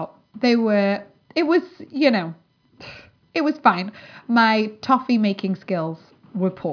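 A speech recording, with nothing technically wrong to report.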